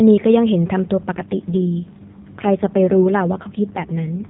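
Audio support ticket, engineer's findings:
AMR rate drop, 1.12 s to end. Speech goes buzzy and synthetic; band unchanged, no gap. Fits the AMR-NB codec stepping down from 12.2 to 4.75 kbps.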